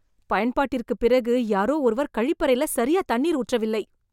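Nothing goes wrong technically anywhere in this bit of speech, so there's nothing here to point out.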